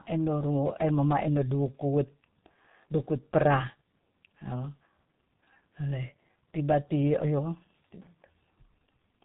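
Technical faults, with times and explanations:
Throughout: G.723.1 codec. The speech carries almost nothing above 3.8 kHz, so it sounds muffled. The heavy hoarse, buzzy texture and smeared consonants point to a very low bitrate of around 6 kbit/s. The codec fits each 30 ms frame to a coarse model of the voice that updates too slowly to follow quick changes, so fine detail and short transients are replaced by an approximation that blurs sibilants and plosives.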